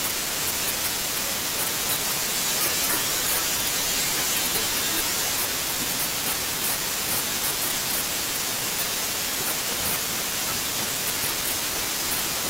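Chunks out of order: a 20 ms block of the speech arrives late and plays after the ones meant to follow it, one chunk late at 1.04 to 1.08 s and three late at 3.6 to 3.68 s. Each spot sounds briefly jumbled.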